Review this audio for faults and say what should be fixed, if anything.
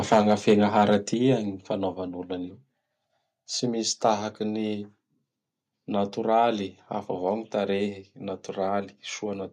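Microphone overload, 0.11 to 0.96 s and again at 4.05 to 4.09 s: the loudest speech peaks have their tops flattened, giving a harsh, crackling edge. The first stretch is the worst, with peaks pushing about 8 dB past full scale; the second is brief and only about 1 dB over, with a small fraction of samples cut in each. The likely cause is an input gain set too hot, so the converter runs out of headroom. To prevent it, set the microphone input lower before recording so the loudest peaks stay well under full scale.

Microphone volume stepped down, at 0.14, 1.14, 4.14 and 7.29 s: the speech and the background drop together in sudden single steps of about 3 dB, 6 dB, 3 dB and 1 dB. The first and third steps land right after distorted peaks. The likely cause is call software detecting an overloaded input and cutting the device's level automatically, so the loudness lurches instead of staying even. 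To prevent it, turn off automatic input gain adjustment and fix the level manually.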